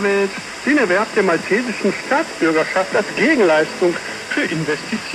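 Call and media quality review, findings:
Train of clicks, 1.07 to 2.08 s: steady ticking at 15 clicks/s, a dozen-plus near-identical pops riding over the sound at roughly its own level. Likely interference from nearby gear or a faulty connection injecting a repeating pulse.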